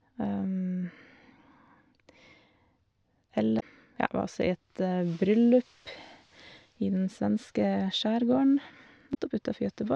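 Speech clip with damaged data in a compressed stream at 3.57–3.63 s and 9.11–9.16 s: the decoder misreads corrupted frames, giving brief glitches.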